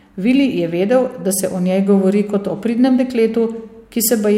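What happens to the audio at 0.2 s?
Nothing goes wrong at 0.2 s; the speech there plays through cleanly, with no dropout, click or distortion.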